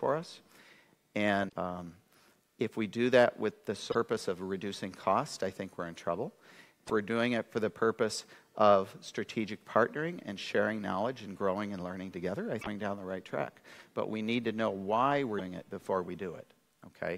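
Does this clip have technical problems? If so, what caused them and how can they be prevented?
Yes. Damaged data in a compressed stream causes short chirps, squawks, clicks or holes at 1.45–1.53, 3.88–3.95, 6.83–6.90, 12.58–12.67 and 15.37–15.41 s. Corrupted bytes make the decoder misread frames and lose sync until it finds the next header. Checksummed, error-protected transport and storage prevent it.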